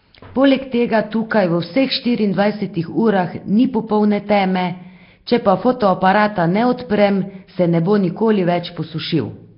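Nellymoser compression runs throughout: the speech has a rough, hissy halo and a smeared, underwater quality, with nothing above 5.3 kHz. The likely cause is heavy Nellymoser Asao coding at a rate fitting about 22 kbps, which gives weak bands no bits and fills them with noise.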